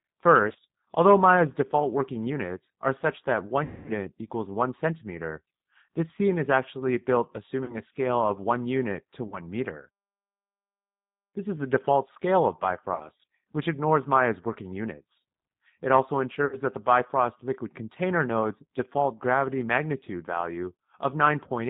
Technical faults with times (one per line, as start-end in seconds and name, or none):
0.00-21.70 G.729 codec
0.53-0.57 VoIP packet loss concealed by the speech codec
3.64-3.90 VoIP packet loss concealed by the speech codec
7.64-7.78 VoIP packet loss concealed by the speech codec
9.28-9.40 VoIP packet loss concealed by the speech codec
12.94-13.09 VoIP packet loss concealed by the speech codec
16.46-16.57 VoIP packet loss concealed by the speech codec